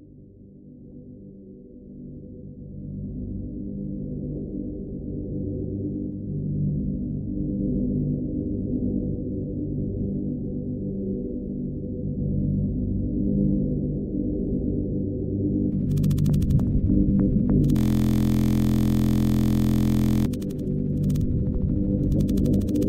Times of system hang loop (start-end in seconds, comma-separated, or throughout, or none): 17.76-20.26